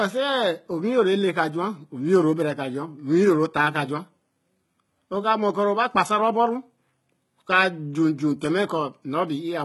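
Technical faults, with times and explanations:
Throughout, HE-AAC compression: Nothing reaches above 11.8 kHz. The top of the spectrum is bright but false. The damage is heavy. S sounds come out gritty, lispy and metallic. The cause is likely HE-AAC at a very low rate, which fits roughly 16 kbps. Only the lower band is truly coded. The treble is copied up from it and shaped coarsely. Its harmonics fail to line up with the speech below.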